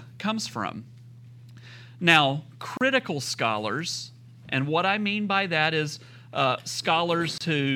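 At 2.77 s, just before "scholars and what I", and again at 7.38 s, the speech breaks for about 36 ms and 27 ms: a gap at a join of encoded pieces, where encoder start-up delay and end padding were left in. Unlike a dropout, nothing is lost, and the sound resumes exactly where it stopped.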